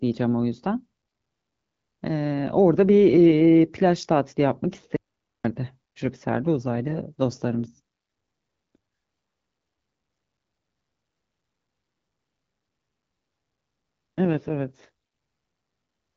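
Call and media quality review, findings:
Audio dropout to silence, 4.96 to 5.44 s. Sound cuts off mid-flow and returns after 0.48 s. The gap is silent, with no room tone. Likely input loss before the encoder, which kept writing silence. Content in the gap is unrecoverable.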